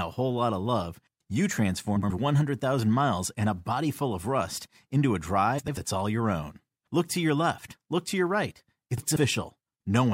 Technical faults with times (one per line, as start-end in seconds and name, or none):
1.96-2.11 frames out of order
5.58-5.77 frames out of order
8.97-9.16 frames out of order